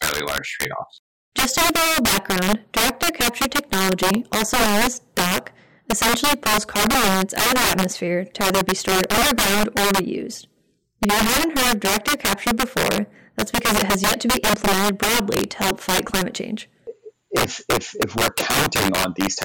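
Integer overflow runs through the whole of this speech clip: the signal path is driven about 15 dB past its integer ceiling, and instead of being limited, any sample that exceeds the largest value wraps around to the opposite extreme. Around 7 percent of samples land over that line, so every loud syllable peak jumps across the full range and back, producing harsh, violent cracks far sharper and more explosive than ordinary clipping would give.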